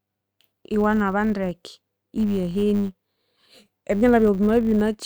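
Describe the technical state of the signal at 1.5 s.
A filter restarted on every block is audible at 1.5 s, as it is across the whole of the speech. The filter discards its internal state at each block boundary and begins again from silence, so every block opens with a small transient. Those transients repeat at 100 Hz, which points to blocks of about 10 ms. They form a steady buzz under the speech whose loudness rises and falls with the signal's level.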